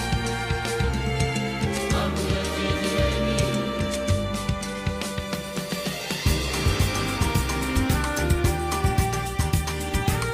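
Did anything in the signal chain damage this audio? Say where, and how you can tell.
No, nothing along the chain seems to have harmed this one, and I can't point to any stage where the sound was knocked about.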